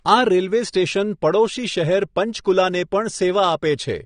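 Throughout the speech the sound is dull and smeared, with nothing above about 9.7 kHz and a fizzy, warbling edge on sibilants and held vowels. This is likely AAC compression at a low bitrate, which fits roughly 32 kbps AAC-LC, trimming the top band and coarsely quantising what remains.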